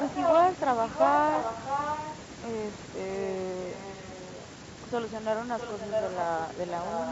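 A speech recording carries a delayed second copy of the voice in five stretches: 0 to 0.34 s, where the copy is louder than the direct speech; 1.3 to 2.16 s, 5.59 to 6.24 s and 6.68 to 7.11 s, where it sits a little below it; and 3.63 to 4.46 s, where it is only faintly audible. Each time it trails the original by 656 ms. This is an echo leak, likely because the far end was on a loudspeaker and its echo canceller let part of the returned signal through, sending the voice back about two-thirds of a second late. A single sharp click falls at 6.12 s, inside one of those echo stretches. It comes from dropped samples, likely a loss of a fraction of a millisecond that makes the waveform jump abruptly to a later value, too brief to remove any audible sound. The lowest bass is taken out, as expected from call microphone processing.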